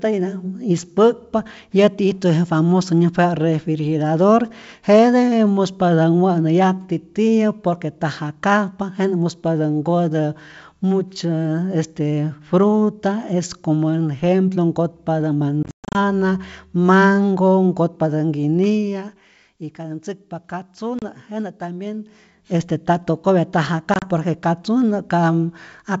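A speech recording carried over a G.722 wideband call shows packet loss on an ADPCM call at 15.63–15.98 s after "ejemplo nkotpatä" (about 250 ms missing across 320 ms, longest hole 130 ms), at 20.99–21.03 s (about 30 ms), and at 23.94–24.05 s between "este nta tokopya nta" and "por que". Each gap is a hard-edged silence, after which the decoder's predictor and step size are out of step, so the speech resumes with brief distortion. Zipper noise runs from 18.52 to 19.32 s, between "mango nkotpatä" and "y katä ntzäkpa". A level drop of about 10 dB is applied in unsmoothed increments, roughly 30 per second, leaving an audible ticking over the fade.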